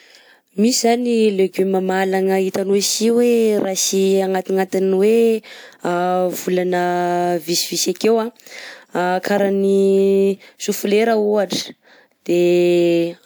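No audible technical faults occur anywhere in the recording.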